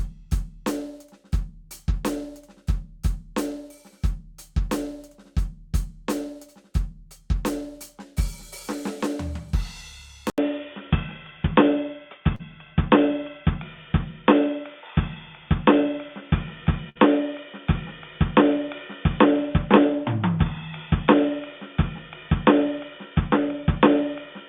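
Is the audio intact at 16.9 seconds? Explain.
No. A burst of packet loss runs from 16.89 to 16.97 s: about 60 ms of music is missing, and the receiver stretches the last sound for roughly 61 ms while fading it. It is heard as a brief held buzz or hiss, then a jump ahead. On a spectrogram it appears as smeared horizontal bands that fade out before a clean cut.

The moment also falls inside a span from 10.30 s to the end where the music is dull and boxy, likely from an input switched to a poorer device. Nothing reaches above 3.6 kHz, the level shifts by about 5 dB, and a new noise floor sits far below the music. A spectrogram shows a hard ceiling at 3.6 kHz, and the waveform shows an 80 ms silent gap at the switch.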